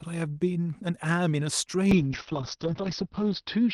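From 1.94 s to the end, the speech turns rough and muffled: a call bitrate drop from 40 to 7 kbps narrows Opus bandwidth from 12 to 6 kHz.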